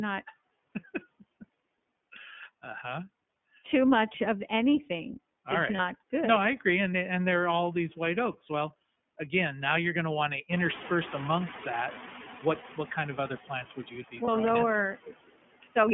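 A noise suppressor runs through the whole clip, pulling down the frequency bands it judges to be steady noise by about 15 dB, frame by frame. The residual background therefore sinks in the pauses and swells back under the speech. What remains of it has a fluttering, warbly texture, and the voice itself takes on a thin, slightly watery colour wherever noise sits beneath it.

The audio has also been carried by the iLBC codec, and the band is confined to roughly 150 Hz to 3.4 kHz, so everything above that is gone and the sound is plainly narrowband. Because iLBC codes each frame's excitation independently, the voice has an audibly rough, somewhat synthetic grain, and the coding damage is plainly audible. The quality fits iLBC's 13.33 kbps mode with 30 ms frames.

Lost iLBC frames occur three times: at 5.76 to 5.79 s, just after "anything all is right"; at 12.59 to 12.64 s; and at 14.25 to 14.29 s, just after "plants would you be". 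Each gap is about 30 ms, consistent with a single dropped frame. The decoder fills it by repeating the last pitch cycle blended with noise, which produces a brief held, buzzy, breathy vowel-like smear. Since the following frames stand on their own, the voice snaps back almost immediately.

At about 10.5 s the room noise jumps by about 21 dB and ends up sitting only about 14 dB under the speech. The noise suppressor's estimate lags behind this rise. From 10.51 to 12.82 s it is still catching up, so the louder background passes through with only about 6 dB of reduction at first. The noise then gradually sinks over roughly 2.3 s as the estimate adapts, settling just before "kind of other plants".

From 15.63 to 15.76 s the noise suppressor mistakes part of the speech for noise and cuts it along with the background, by about 13 dB at its deepest. For roughly a sixth of a second the speech sounds swallowed and faint, as though it had been ducked under the noise floor, before the level returns.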